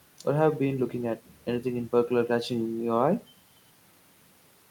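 Nothing to flag: no audible technical faults anywhere in the speech recording.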